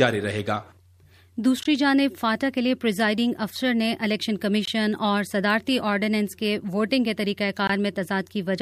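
At 1.63, 4.65 and 7.67 s the audio drops to silence for 20 ms: a gap between chunks. The stream arrives in 3.0 s chunks with silence inserted at each join, so no sound is lost but it breaks into short, hard-edged holes at a steady spacing.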